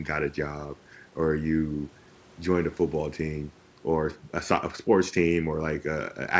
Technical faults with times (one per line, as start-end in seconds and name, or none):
none